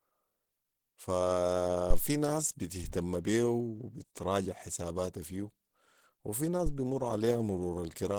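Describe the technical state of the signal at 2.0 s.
A phantom power thump runs from 1.90 to 1.99 s, ending just before the 2.0 s mark. A supply switched on or off on the live input sends a voltage step through the coupling capacitors, and it arrives as a deep, blunt low-frequency knock. Here it is brief, dying away in about 19 ms, so it sounds like a short dull bump rather than a long boom.

The same stretch also carries Opus compression damage that is plainly audible. The speech has a muffled, hoarse quality, and the higher detail sounds grainy and roughened instead of clean. That character is what the codec's hybrid speech mode produces when squeezed hard, and it fits a low bitrate of around 16 kbps. The spectrum still reaches up to about 20.4 kHz, so the damage is heard as a coarse texture rather than a narrowed, dull top end. The likely cause is Opus encoding at that reduced rate.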